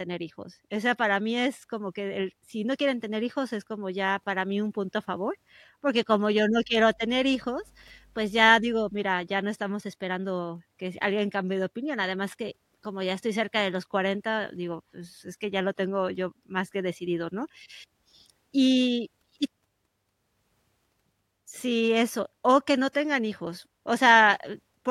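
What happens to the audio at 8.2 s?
A ground loop or a nearby transformer is coupling the 50 Hz power line into the signal, producing mains hum from 6.5 s to 8.97 s, so 8.2 s falls inside it. The hum begins just after "favor porque como yo" and is gone by "ya no estamos esperando". It sounds like a steady low drone with some low harmonics, sitting about 30 dB below the speech.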